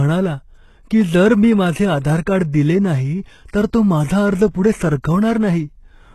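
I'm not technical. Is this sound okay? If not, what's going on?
No, the speech has plainly audible damage all the way through, most likely from HE-AAC compression at a low quality setting. The sharp hissing sounds, like s and sh, come out gritty, metallic or lisped. Above roughly 12.3 kHz there is nothing at all. Unlike an ordinarily muffled recording, the top end still sounds bright, because the encoder fills it with copied, reshaped lower sound instead of the real detail, and that fake treble doesn't quite match the voice underneath.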